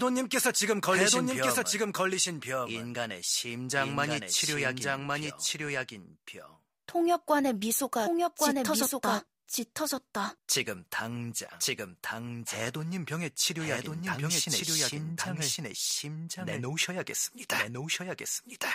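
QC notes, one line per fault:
Throughout: doubled audio track, the speech repeats about a second later at equal level with no decay, likely a second capture path mixed in.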